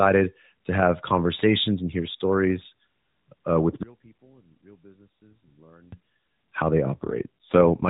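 One channel inverted, from 3.83 to 5.92 s: right after "uh with" the speech drops by about 31 dB, collapsing to a faint trace until just before "how they". The likely cause is one stereo channel arriving with reversed polarity, so when the two near-identical channels are summed to mono, everything common to both cancels and only their small difference survives, stripping out the centred voice.

AMR rate drop, from 6.86 s to the end: just after "how they" the speech turns rougher and more synthetic, with a buzzy, processed edge, while the bandwidth stays the same and nothing cuts out. The AMR narrowband codec, which until then carries the speech at 12.2 kbps with only light damage, falls to 5.9 kbps. With fewer bits for the vocal-tract model and its excitation pulses, the codec reproduces the speech more crudely.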